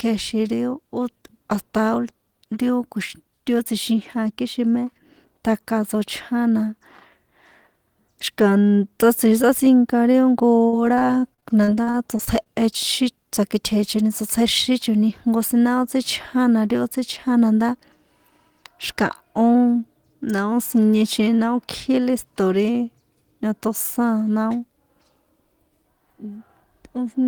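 At 10.11 to 10.16 s there is a short stall from a late packet. One packet arrived after its playout time. The jitter buffer ran dry, so the receiver held the last sound for about 24 ms. When the packet arrived, playback resumed where it had stopped. No speech is lost. The delay grows by 24 ms. You hear one sound stretched slightly too long, with a faint buzz or dip.

From 10.67 to 12.47 s there is repeated packet loss, heard as robotic sound. Packets go missing or arrive late 14 times in under two seconds. Each gap is patched by extending the previous sound, about 355 ms in total. About 260 ms of speech is gone outright. The longest gap lasts 61 ms. Around a fifth of the stretch is concealment. The speech turns choppy and robotic, with pieces dropping out.

From 13.95 to 15.10 s there is a jitter buffer speed-up. The buffer held more audio than its target, so the receiver worked to reduce the delay. 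It cut out many short slices, each one or a few pitch periods long. Roughly 70 ms is removed. The speech plays at about 106% of normal speed. The pitch does not change. The talker sounds briefly hurried.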